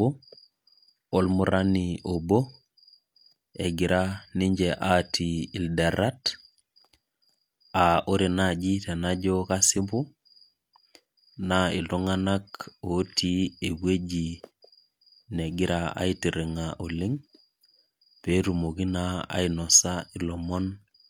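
Nothing in this speech recording stands out as a technical fault at any point, so there's nothing here to flag.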